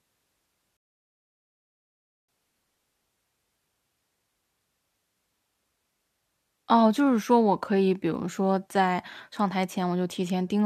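A rebuffering stall interrupts this speech recording: the player exhausted its downloaded audio and had to wait for more data before continuing. From 0.77 s to 2.29 s the sound drops to silence, then picks up exactly where it broke off, with nothing skipped. The interruption adds about 1.5 s to the running time, and the speech after it plays later than it should.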